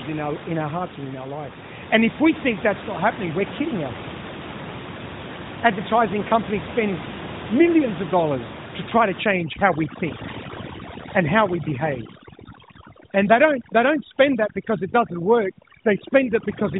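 From 9.23 s, after "dollars to try to", to the end, overdone noise removal mutes bands near the noise floor, leaving speech over twinkling near-silence.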